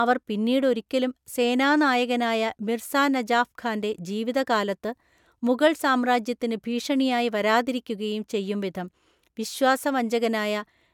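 No technical faults are audible.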